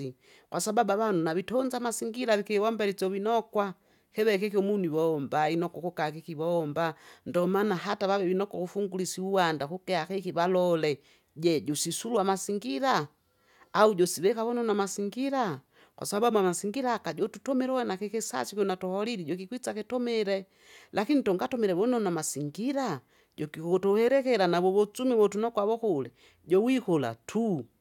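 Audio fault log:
No faults found in the speech recording.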